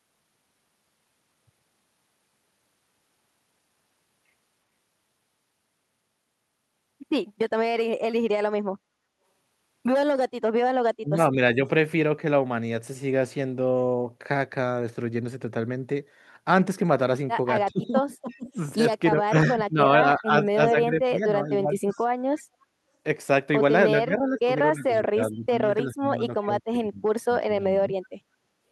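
The speech dips sharply and breaks up in pieces from 10.99 to 11.59 s, again from 17.65 to 18.57 s, 19.11 to 19.79 s, 20.18 to 21.94 s, and longest from 23.91 to 27.95 s, where roughly half of that stretch is turned down. At its deepest the level falls by something like 20 to 30 dB. This is speech suppressed in double talk, likely caused by an echo canceller that, with both ends talking at once, could not tell the local voice from loudspeaker echo and pulled everything down.

Inside the 17.65 s dip, from 18.3 to 18.49 s, and briefly at 22.36 s, a faint scrap of the voice returns 343 ms late, far quieter than the speech itself. This is echo leak, likely an echo canceller letting part of its loudspeaker pickup through and sending it back.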